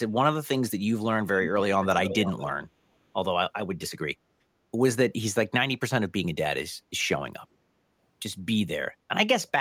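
An echo canceller on a far-end loudspeaker likely let some of its microphone pickup through, producing an echo leak from 2.05 to 2.52 s: a delayed copy of the speech, lagging by about half a second and roughly 10 dB below it.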